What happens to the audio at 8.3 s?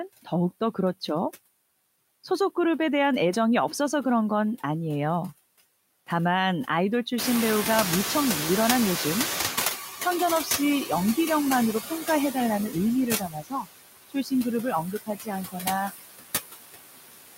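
Noise suppressor catching up, from 7.18 to 9.86 s: room noise jumps by about 21 dB around 7 s, and the suppressor's noise estimate lags, cutting only about 12 dB at first before the noise sinks over roughly 2.7 s. Underneath, noise suppressor artifacts run throughout, with about 18 dB of frame-by-frame band reduction, so the noise sinks between words and rises under them.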